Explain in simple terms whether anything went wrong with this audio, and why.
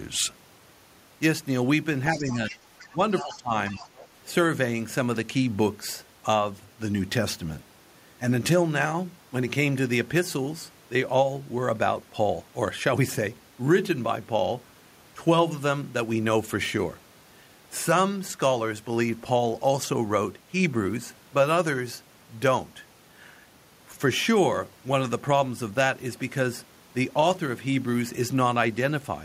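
Two related faults show up close together, between about 2.1 and 4.1 seconds into this speech.

The first is the other side's voice leaking through, at 2.12 to 2.58, 2.80 to 2.94, 3.17 to 3.37 and 3.67 to 4.06 seconds. A second, fainter voice can be heard underneath the main talker. The likely cause is that the talker's loudspeaker was picked up by their own microphone, and the echo canceller didn't fully remove it. The clue is that something is added: an extra voice that shouldn't be there.

The second is speech suppressed in double talk, at 2.15 to 2.56, 2.88 to 3.00 and 3.22 to 3.52 seconds. Here the main talker's own voice dips noticeably, or briefly drops out in pieces. The likely cause is the echo canceller, faced with both people talking at once, turning everything down rather than just the echo. The clue is the opposite of the leak: something is taken away, since the wanted voice gets weaker at the same moments the other voice is present.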